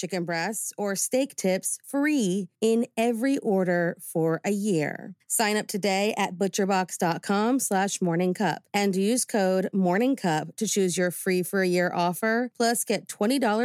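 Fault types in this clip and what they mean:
Microphone volume stepped up: the software raised the microphone's input volume in one step, so speech and background jump together by about 4 dB at 1.02 s.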